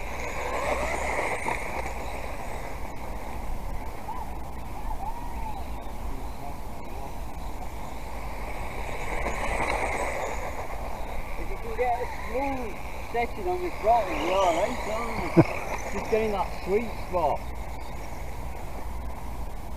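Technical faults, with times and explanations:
Nothing here stands out as a technical problem; the audio comes through without any trouble worth pointing to.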